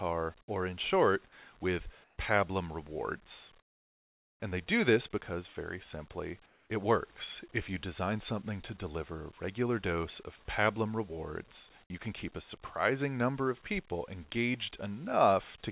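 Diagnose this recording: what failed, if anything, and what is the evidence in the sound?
Comfort noise in place of the background, likely from the call's discontinuous transmission: the real background drops out at 2.04–2.18 s, 3.6–4.42 s and 6.46–6.7 s, swapped for flat, featureless hiss about 3, 17 and 5 dB quieter, then snaps back when sound resumes.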